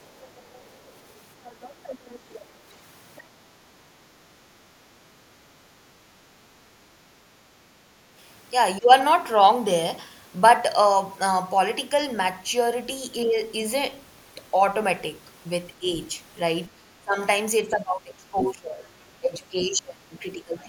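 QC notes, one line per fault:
0.06–2.71 s and 3.16–3.22 s, other side's voice leaking through: a second voice sits under the talker, about 20 dB down in the long stretch and about 25 dB down in the brief scrap. This is likely residual far-end loudspeaker echo that the echo canceller failed to remove from the microphone.
18.39–18.51 s, other side's voice leaking through: a short burst of the second voice only about 10 dB below the talker, landing inside the suppressed stretch below. This is likely uncancelled loudspeaker echo breaking through while the canceller was struggling with simultaneous talk.
8.79–8.91 s and 15.79–15.87 s, speech suppressed in double talk: brief dips in the talker's level, about 15 dB and about 10 dB deep, each lasting roughly a tenth of a second or less. These are likely the canceller attenuating the near-end signal when both sides spoke at once.
16.67–17.17 s, 17.63–18.83 s and 19.2 s to the end, speech suppressed in double talk: longer level drops of about 20 dB, about 20 dB and about 25 dB, lasting roughly half a second, one second and one and a half seconds. 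The talker is pushed down, likely because the canceller could not separate near-end speech from echo and suppressed both.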